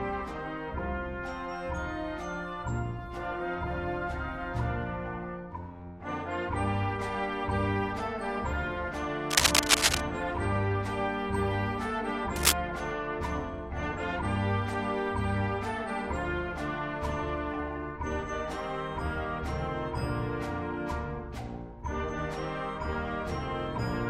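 From 9.30 to 10.00 s and again at 12.36 to 12.52 s, cable scratch noise (uneven rustling bursts a little louder than the sound, likely from a worn connector) shows as ragged broadband smears.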